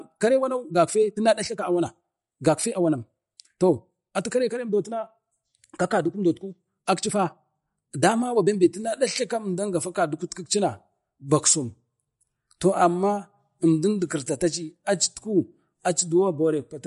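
A speech recording carries plainly audible MP3 compression for its whole length. Weak spectral detail flickers in and out between frames, giving a watery, swirling texture and metallic edges on sibilants, which fits a low bitrate around 48 kbps. From 0.0 to 8.72 s the audio plays about 1.38 times faster with unchanged pitch, sounding rushed before the pace drops abruptly to normal. This is likely a time-stretched section, where short pieces were dropped to shorten the passage.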